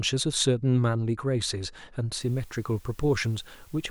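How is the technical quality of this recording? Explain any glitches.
The recording is compromised in its final stretch. From 2.20 s to the end, the audio shows low bit depth with dither: the signal has been reduced to very few amplitude steps, consistent with about 8 bits, and random dither was added before rounding. That trade turns the quantisation error into a steady white hiss, roughly 30 dB below the speech. It sits evenly under the voice without the gritty distortion undithered truncation would produce.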